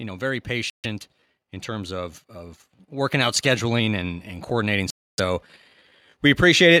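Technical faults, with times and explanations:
0.70–0.86 s and 4.90–5.20 s, Bluetooth stall: The speech cuts to silence twice, after "know very" for about 140 ms and later for about 280 ms. Each time it resumes where it stopped or slightly later. This likely comes from a Bluetooth link whose buffer ran dry while delayed packets were resent.
1.67–5.49 s, automatic gain rising: The level climbs by about 6 dB over nearly four seconds. Voice and background swell together. An automatic gain control judged the input too quiet and slowly raised its gain.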